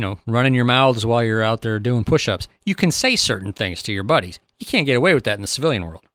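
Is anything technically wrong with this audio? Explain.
No technical faults are audible.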